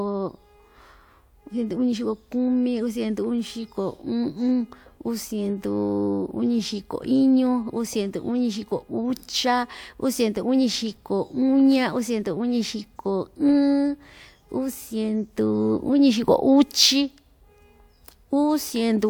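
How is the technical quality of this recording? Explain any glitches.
No glitches to explain here: nothing in this speech recording drops out, clicks, stutters or breaks up at any point.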